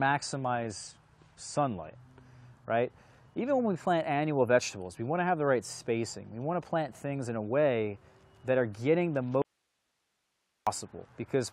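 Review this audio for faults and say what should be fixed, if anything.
For the first 2.0 seconds the stream sits on a low-bitrate rendition of an adaptive stream. Nothing comes through above 9.8 kHz and codec artefacts are stronger, which fits roughly 32 kbit/s AAC. Then it jumps cleanly to a fuller version, likely around 96 kbit/s. Starting the player on a higher rendition, or pre-buffering before playback, would avoid that.

From 9.42 to 10.67 s there's an audio dropout to a faint residue. The sound cuts out abruptly for about 1.25 s, leaving only hiss roughly 50 dB down, then snaps back. That points to the signal being lost upstream while the path stayed live. Checking the source connection and adding redundancy there should stop it.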